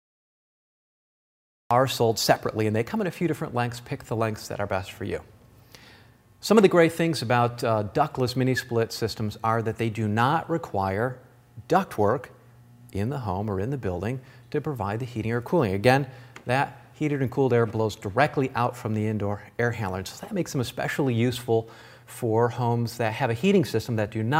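The clip opens with digital silence until 1.71 s, then a cut-off start: capture began late, so audio enters mid-sound with no natural attack or fade.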